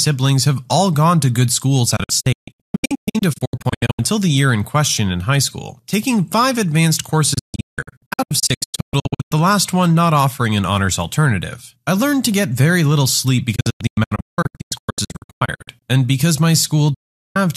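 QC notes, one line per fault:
1.96–3.99 s, digital broadcast dropout after "gone to good schools": the receiver mutes in scattered holes totalling about 1.1 s over 2.0 s, longest 144 ms, each faded in 8 ms, resuming at "the year in question".
7.34–9.32 s, digital broadcast dropout: the same pattern, 1.2 s lost over 2.0 s, longest hole 168 ms.
13.55–15.83 s, digital broadcast dropout after "get very little sleep": 1.3 s lost over 2.3 s, returning at "and because my".
16.94–17.36 s, digital broadcast dropout after "and because my": a solid 408 ms mute.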